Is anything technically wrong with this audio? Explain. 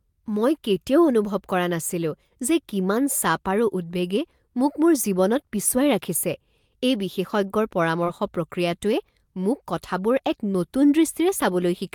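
Yes. From 7.48 to 7.52 s the speech has a short stall from a late packet: the jitter buffer ran dry, so the last sound was stretched by about 21 ms until the packet arrived. Nothing is lost, unlike a packet-loss dropout; the sound just holds briefly, with a slight buzz or dip.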